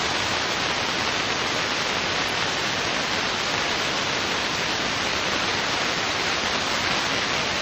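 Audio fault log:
Nothing stood out on listening to this recording of sounds.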